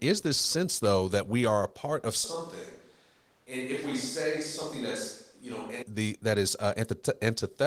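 A switch to a distant microphone runs from 2.24 to 5.82 s in this speech clip. The voice abruptly turns roomy and hollow, loses bass, drops by roughly 10 dB and gains faint room noise, then snaps back, likely because a farther pickup briefly replaced the close microphone.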